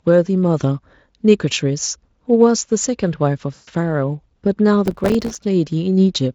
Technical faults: VoIP packet loss concealed by the speech codec; processor overload crackle

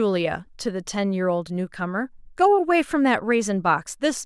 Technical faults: none

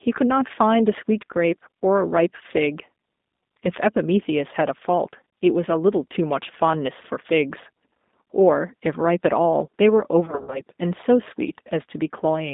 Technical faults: G.729 codec; VoIP packet loss concealed by the speech codec

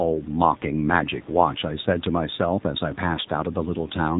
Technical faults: AMR narrowband mobile codec

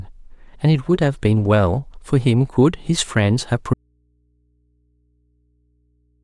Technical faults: audio dropout to a faint residue

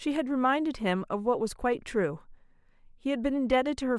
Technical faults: none

